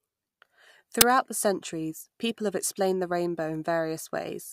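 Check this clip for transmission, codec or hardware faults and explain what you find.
There is one fault in this speech clip, a file-tags-played-as-audio event at 1.01 s. For about 10 ms the decoder hands the output stage a block of metadata instead of sound, here an embedded cover picture. Because that image data is already compressed, its bytes are close to random, so reading them as samples produces a very loud burst of white noise. It is heard as a sharp crack of static with hard edges, cutting abruptly in and out.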